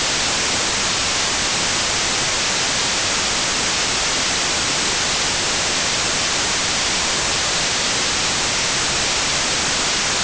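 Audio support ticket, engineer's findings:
Wrong sample width, whole clip. Loud hiss-like noise over the full length with the speech buried underneath, running at half speed and roughly an octave low. Fault is in the file reader or decoder. Audio written as 32-bit integers is being read as 16-bit, so every real sample splits in two. The high half carries the actual top bits, and the low half comes out as junk, which is the noise. Twice the sample count at the same rate gives the 0.5x speed.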